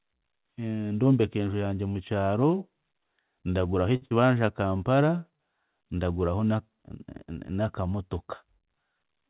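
At 3.96 s a packet arrived late and the jitter buffer ran dry, producing a short stall from a late packet. The receiver held the last sound for about 55 ms until the packet came in, then carried on where it left off. Nothing is lost, but the sound hangs briefly with a faint buzz or dip, and the playout delay grows by 55 ms.

Right after, from 4.06 to 4.13 s, a burst of packet loss arrived too late to play. The receiver extended the last sound for about 49 ms while fading it, producing a held sound that dims away. It then resumed with about 60 ms of speech skipped, so the sound jumps forward.

From 8.99 to 9.28 s a jitter buffer speed-up trims the extra delay. Short pitch-period pieces, roughly 40 ms in total, are cut out in quick succession. Speech runs at 112% speed with unchanged pitch and sounds rushed. This runs over the band-limited G.711 A-law sound, which has nothing above 4 kHz.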